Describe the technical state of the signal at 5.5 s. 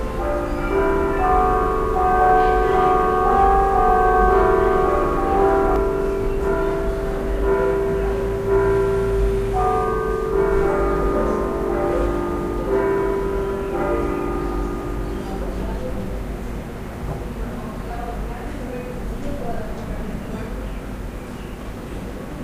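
At 5.5 s a doubled audio track is present, running from the start of the clip and ending abruptly at 5.76 s. A full-band copy of the sound trails the original by about two seconds, roughly 5 dB quieter and without decay or room colour, likely from a second, slower capture path.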